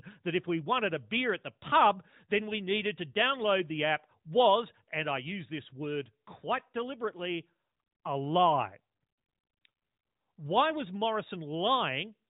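No technical faults are audible in this speech.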